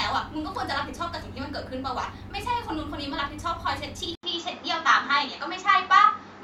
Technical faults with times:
4.15-6.43 input switched to a poorer device

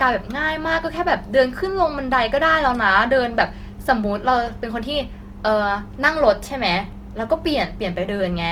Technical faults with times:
0.00-8.51 Opus compression

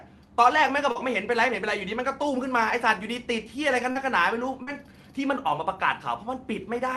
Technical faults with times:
0.91-0.98 short concealed packet loss
3.91-3.98 short concealed packet loss
4.63-4.70 short concealed packet loss

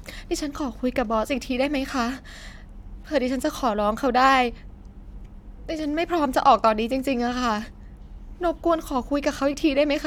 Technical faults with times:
none

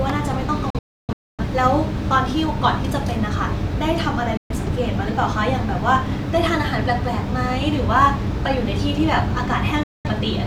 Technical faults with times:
0.70-1.43 digital broadcast dropout
4.37-4.55 digital broadcast dropout
9.83-10.09 digital broadcast dropout

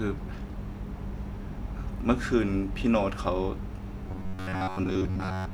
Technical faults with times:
4.08-5.54 robotic sound from repeated short buffers

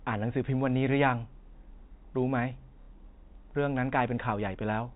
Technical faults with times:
2.82-2.88 packet loss with last packet repeated

